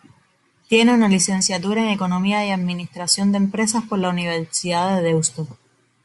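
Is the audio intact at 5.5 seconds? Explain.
No, not really. At 5.5 s the speech carries the same Bluetooth LC3 compression damage heard across the whole clip, and it's plainly audible. The top end sounds breathy and grainy, as if the upper band has been thinned out and patched with hiss. That's likely a transform codec throwing away high-frequency detail and filling the gaps with noise, frame by frame, in a way that fits 10 ms frames at around 48 kbps.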